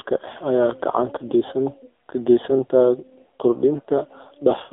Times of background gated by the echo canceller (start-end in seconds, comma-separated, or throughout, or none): none